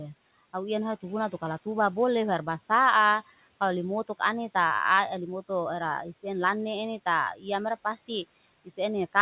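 Speech cut by the noise suppressor occurs from 7.35 to 7.45 s. The suppressor mistook part of the speech for background and pulled it down by as much as about 9 dB for roughly a tenth of a second, so that stretch sounds swallowed and faint.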